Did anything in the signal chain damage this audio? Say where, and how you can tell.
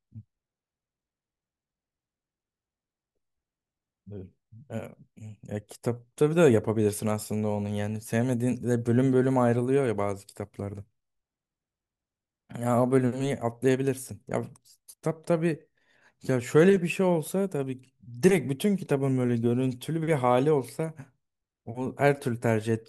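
No, nothing in the signal chain damaged this audio.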